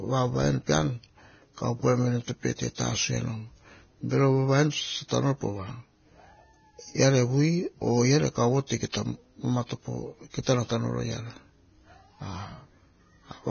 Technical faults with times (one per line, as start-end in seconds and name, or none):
0.00-13.50 Vorbis compression
8.92 pre-echo